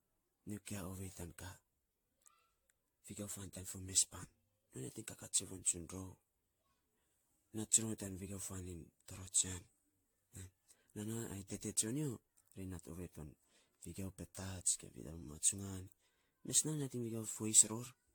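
From start to finish the speech sounds swirly and hollow, with smeared consonant attacks and nothing above 19.2 kHz. This is generation loss, likely from roughly ten AAC-LC passes at around 96 kbit/s, each re-quantising on a shifted frame grid so the damage builds up.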